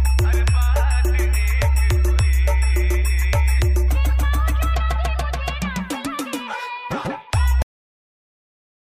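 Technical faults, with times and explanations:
7.62–8.96 s, cut-off end: the sound stops mid-event at 7.62 s and drops straight to digital silence with no decay, because the final buffers were never written.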